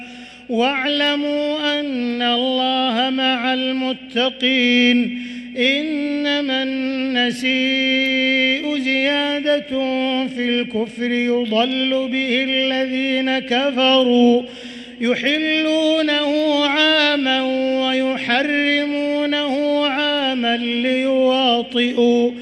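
No technical faults are audible.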